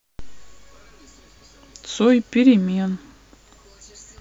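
No technical faults can be heard anywhere in the recording. Nothing in the signal path calls for comment at any moment.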